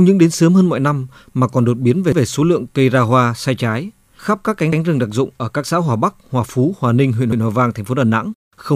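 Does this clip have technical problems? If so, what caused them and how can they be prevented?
Yes. The speech has overlapping chunks. At 2.12, 4.72 and 7.32 s, a 100 ms piece plays twice, heard as a stutter. Each 2.5 s chunk starts before the previous one ends. Trimming or crossfading the overlap at each join prevents it.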